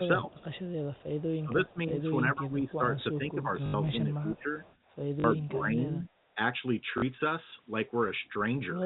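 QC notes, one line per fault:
0.16–0.51, 1.39–2.04, 2.22–2.83, 3.12–4.63, 5.45–6.11 s: speech suppressed in double talk. The level dips by up to about 15 dB, likely from the echo canceller ducking during overlap. These are level drops, not repeats or stutters.
0.33–1.29, 4.35–4.42, 4.63–4.96 s: echo leak. A faint copy of the speech, about 30 dB down, trails 328 ms behind, likely uncancelled loudspeaker pickup. It is a delayed duplicate, not a level drop.
3.66–3.74, 5.20–5.24, 6.98–7.02 s: packet loss with last packet repeated. Gaps of 80 ms, which fits four 20 ms packets, and 40 ms are filled by a buzzy robotic stutter at about 50 Hz.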